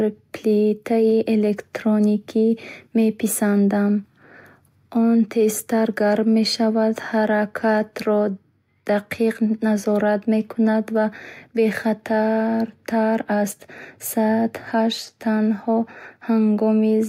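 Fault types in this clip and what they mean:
No technical faults can be heard anywhere in this speech recording. There is nothing to list for it.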